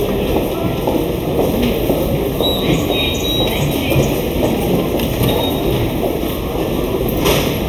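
Throughout the recording, a channel delay of about a third of a millisecond, summed to mono, causes comb filtering: fixed notches starting near 1.5 kHz leave the sound hollow and phasey.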